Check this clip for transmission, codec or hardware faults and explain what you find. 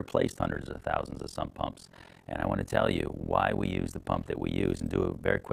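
One fault is present, running through the whole clip: overlap-add ripple. The audio was split into windowed frames and reassembled with an overlap whose windows do not sum to a constant gain, so the level swings once per frame. Here the swing repeats at around 40 times a second with a depth of about 60 dB, meaning each cycle dips nearly to silence. The result is a rapid, continuous pulsing chopped into the sound.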